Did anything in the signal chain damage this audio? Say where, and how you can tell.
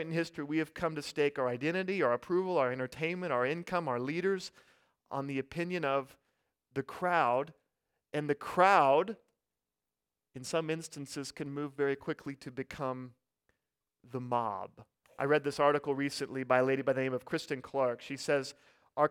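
No, nothing in the signal chain damaged this speech.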